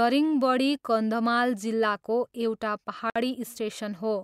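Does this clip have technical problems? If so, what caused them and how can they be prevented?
Yes. A gap at a join of encoded pieces opens from 3.10 to 3.16 s, just after "जिल्लाको एउटा": a 57 ms gap where the encoder's start delay and end padding were never trimmed. Unlike a dropout, no sound is lost; the speech resumes exactly where it stopped. Prevent it by encoding the whole recording in one pass, or trimming the encoder delay and padding before joining.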